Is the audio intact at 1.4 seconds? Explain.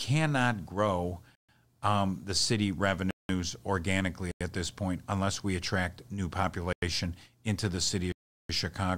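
No, there's a block of digital silence from about 1.35 to 1.49 s, roughly 134 ms where the sound drops to silence. The speech cuts out with no fade and snaps back, leaving a short hole.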